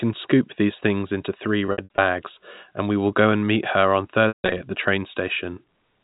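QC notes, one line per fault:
1.66–1.98 s, packet loss with pitch repetition: just after "these things into three", short scattered gaps of up to 60 ms get patched with a repeated pitch period, so the sound turns briefly buzzy and held.
4.28–4.60 s, packet loss with pitch repetition: after "and meet her on", a 160 ms run of loss outlasts the repeated pitch, which fades to silence before the speech cross-fades back in.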